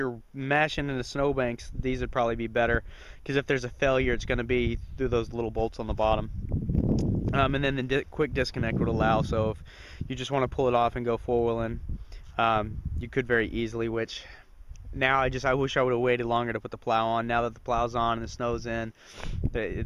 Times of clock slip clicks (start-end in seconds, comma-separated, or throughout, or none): 0.17-19.83